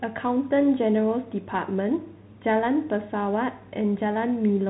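Bluetooth CVSD headset codec damage runs throughout this speech clip: nothing passes above about 3.9 kHz, and the plainly audible granular, slope-limited distortion fits one-bit delta coding at 64 kbps.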